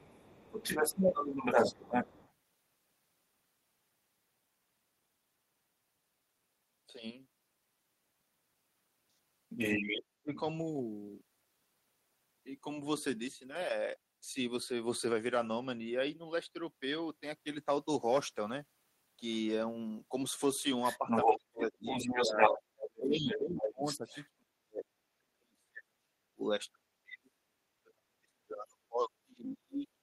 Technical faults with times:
0.00-2.33 other side's voice leaking through
9.49-10.40 other side's voice leaking through
10.23-10.44 speech suppressed in double talk
20.83-24.27 other side's voice leaking through
20.99-30.02 speech suppressed in double talk
29.48-29.52 other side's voice leaking through

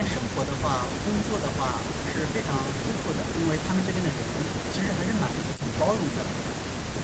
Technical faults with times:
none

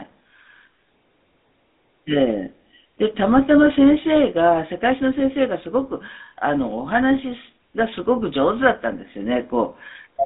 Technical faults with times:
0.00-10.25 GSM full-rate codec

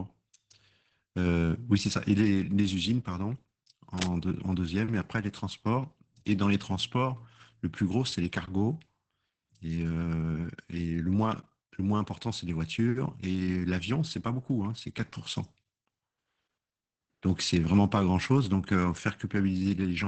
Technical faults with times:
0.00-20.07 Opus voice compression
3.97-4.14 cable scratch noise

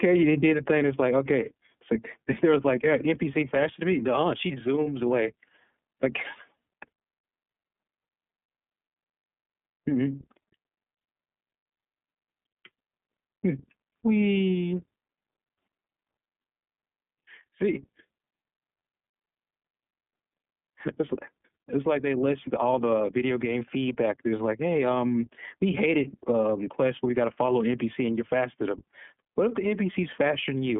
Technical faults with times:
0.00-30.79 iLBC codec

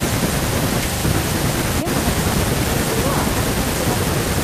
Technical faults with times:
none

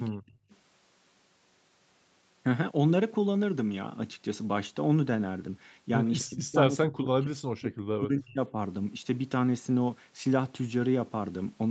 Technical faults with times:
0.10-0.38 speech suppressed in double talk
0.50-0.57 echo leak
6.19-6.25 echo leak
6.26-7.73 speech suppressed in double talk
7.99-8.56 speech suppressed in double talk

